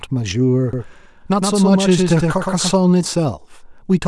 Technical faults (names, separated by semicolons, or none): doubled audio track